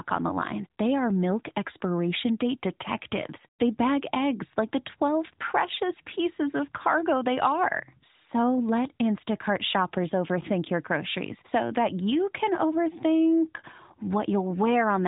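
No technical faults are heard anywhere in the speech. It arrives through an AMR narrowband mobile codec path at 12.2 kbps, so nothing above 3.8 kHz reaches the ear and the codec leaves only light marks on the sound.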